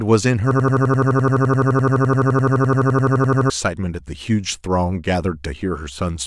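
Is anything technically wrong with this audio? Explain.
Yes. From 0.51 to 3.50 s there is a system hang loop: playback froze while the hardware kept replaying one 85.3 ms slice, consistent with a 2048-sample ring buffer, about 35 times. It sounds like a machine-gun stutter at 11.7 Hz, replacing about three seconds of speech.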